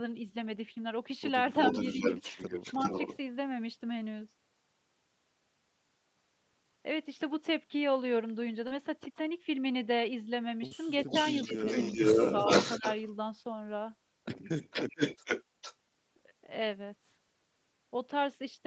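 Echo leak at 1.62 to 3.17 s: a delayed copy of the speech trails the original by about 0.40 s at roughly 5 dB below it, likely because a loudspeaker echo slipped past the far end's echo canceller.

Short concealed packet loss at 8.67 to 8.73 s and 10.67 to 10.73 s: about 40 ms of audio went missing each time, and the decoder filled the gap by extending the preceding sound. Each shows up as a brief smear.

Echo leak again at 11.07 to 13.11 s, delayed about 0.44 s and now roughly 5 dB louder than the speech itself, so the repeat dominates.

Speech suppressed in double talk at 11.45 to 11.49 s, 12.12 to 12.18 s and 12.78 to 12.84 s, during that echo: the canceller likely pulls the talker down by about 10, 15 and 10 dB, producing short dips and dropouts.

Echo leak at 14.70 to 15.44 s, about 0.45 s late and roughly level with the speech, then a faint scrap at 15.61 to 15.75 s, about 0.46 s late and about 15 dB down.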